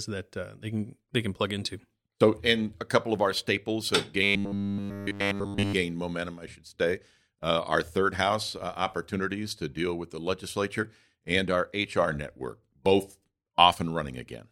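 From 4.23 to 5.73 s, after "of our staples have" and before "momentum I should say", new audio likely stopped arriving in time, and the playback side kept filling the gap by looping its last short buffer while the real signal was skipped. Essentially the whole stretch is repeats. The result is robotic sound from repeated short buffers: the speech collapses into a rigid, metallic buzz pinned at 100 Hz, which fits a 10 ms buffer, loosely tracking the speech rhythm.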